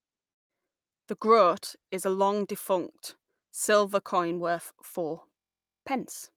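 From 0.31 to 0.51 s the speech drops out, most likely a long network dropout: about 180 ms of audio never arrives, the receiver stretches the last sound into a fading buzz, then near-silence remains until the speech resumes with that stretch missing.

At 5.39 s a system hang loop begins and lasts until 5.83 s: a 23.22 ms slice of audio repeats 19 times, producing a steady buzz at 43.1 Hz. This fits a 1024-sample ring buffer cycling while the system stalls. Essentially no audio is lost.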